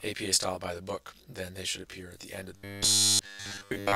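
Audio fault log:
throughout: channel delay (comb filtering). One channel trails the other by around 20 ms, and summing them cancels shared content at evenly spaced frequencies starting near 20 Hz. The result is a rough, slightly doubled sound, but no imposed pitch and no lost audio.
2.56–3.96 s: robotic sound from repeated short buffers. A rigid, metallic 100 Hz buzz runs to the end, with nearly all of the real audio replaced. Unlike comb filtering, it adds a pitch, likely from a 10 ms buffer replayed while fresh audio fails to arrive.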